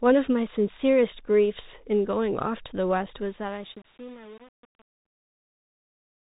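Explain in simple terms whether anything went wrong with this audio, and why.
The speech sounds muffled and phone-like all the way through, with scratchy s sounds and a grainy hiss. That is the Bluetooth CVSD headset codec, which passes nothing above 4 kHz.

At 3.06 s and again at 5.06 s there are tiny gaps with abrupt edges. This is unconcealed Bluetooth headset packet loss: a few milliseconds of sound went missing between headset and phone, and nothing filled the hole.

From 3.21 s to the end at 6.28 s, the smooth fade-out turns gritty as it gets quieter. That is truncation distortion on a fade: the volume was lowered with too little detail, likely about 7 bits, so the quiet waveform breaks into rough steps.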